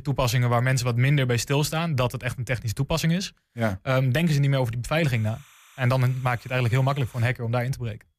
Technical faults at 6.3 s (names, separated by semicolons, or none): timecode bleed